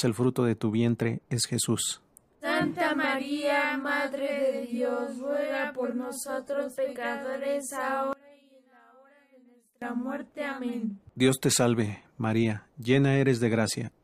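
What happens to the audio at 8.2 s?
From 8.13 to 9.82 s the sound drops by about 26 dB to a faint residue. This is likely one channel inverted: content common to both channels cancels in mono, leaving only their difference. Unlike a true dropout, a faint copy remains audible.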